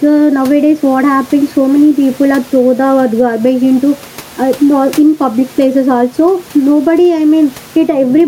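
The speech sounds squashed and breathing throughout, with the level swinging by something like 10 dB. The room noise itself sits about 31 dB below the speech. This is gain pumping, likely from input gain set far too high with a fast limiter clamping down on every loud syllable and releasing in the gaps.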